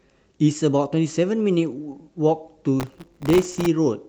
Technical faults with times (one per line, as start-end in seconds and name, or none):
0.00-4.09 clock drift between sender and receiver
0.09-3.99 repeated timing corrections
2.80-3.66 processor overload crackle